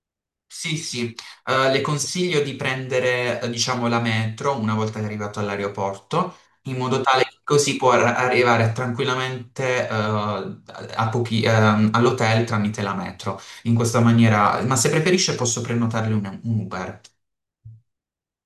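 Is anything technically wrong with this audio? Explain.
No, no technical faults heard.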